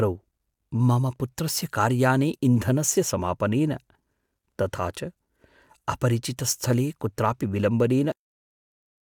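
At 8.12 s the speech stops abruptly in the middle of a sound, a cut-off end. The final stretch of audio was never written out or played, so the signal falls straight to silence for the last 1.04 s with no decay. A natural ending or a fade-out would taper, and a dropout would resume. Here the sound never returns, and the severed sound is left unfinished.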